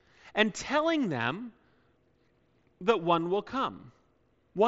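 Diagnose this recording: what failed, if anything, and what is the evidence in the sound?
Nothing stood out on listening to this speech recording, which comes through a Bluetooth mSBC headset link with nothing above about 7.7 kHz.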